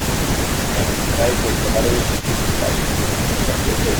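From 0.55 to 1.8 s the speech dips by up to about 10 dB in patches totalling roughly half a second. This is speech suppressed in double talk, likely from an echo canceller that, with both ends active, could not tell the near talker from loudspeaker echo and attenuated everything. Overlapping this, from 0.67 to 2.27 s, an echo leak is audible: a delayed copy of the speech trailing by 212 ms at roughly 10 dB below the direct signal, likely residual echo the far end's canceller failed to remove from its microphone pickup. The same double-talk suppression returns from 2.42 to 3.87 s, again with drops of about 10 dB over roughly half a second in total, likely for the same reason. At 3.94 s, running to the end of the clip, the echo leak reappears with a 213 ms delay at a similar level of roughly 10 dB under the speech, likely again uncancelled loudspeaker pickup being sent back.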